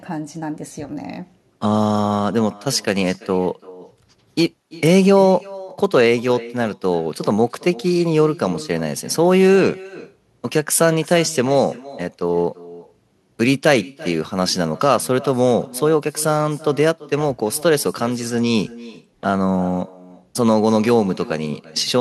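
A speech recording where the far end plays the audio on a loudspeaker that its microphone picks up, with no canceller removing it: echo with no canceller throughout. Every phrase returns roughly a third of a second later as a thinner copy about 20 dB quieter.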